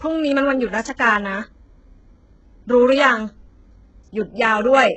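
Speech that likely went through HE-AAC compression at a very low bitrate, around 8 kbps. Its treble is rebuilt from copied lower bands and cut off at 8 kHz, so s sounds are gritty and metallic throughout.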